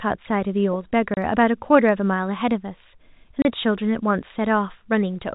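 Packet loss filled with silence at 1.14 to 1.17 s and again at 3.42 to 3.45 s: each time the speech drops into a 30 ms hole, which fits a single lost packet that the receiver replaced with silence. The hole has abrupt edges within the band-limited telephone sound.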